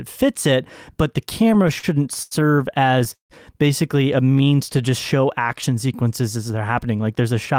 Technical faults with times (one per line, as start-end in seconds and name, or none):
1.47-2.33 repeated stalls (stutter)
2.87-3.32 repeated stalls (stutter)
4.20-6.09 jitter buffer slow-down